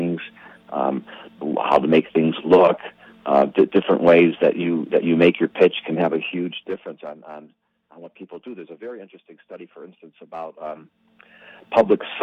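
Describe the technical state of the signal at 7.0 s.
At 7.0 s the signal is inside a stretch of zipper noise running from 5.89 s to 7.25 s. Over that span the level falls by roughly 20 dB, but the gain is applied in discrete jumps, around a hundred per second, rather than as a continuous ramp. Each jump leaves a small click, and together they form a rapid ticking or zipping that rides on the sound until the level settles.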